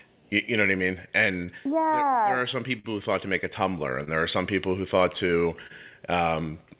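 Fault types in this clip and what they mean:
Clock drift between sender and receiver: the sender's clock runs about 3 percent slow, so the buffer keeps draining, which sets it apart from random network jitter.
Repeated timing corrections: from 0.2 to 2.4 s the sound plays at 98% speed, adding roughly 70 ms in small spread-out stretches rather than one audible gap.
Short stall from a late packet: at 2.79, 4.04 and 5.67 s a sound is held for 48, 27 and 28 ms, then resumes with nothing lost, unlike a dropout.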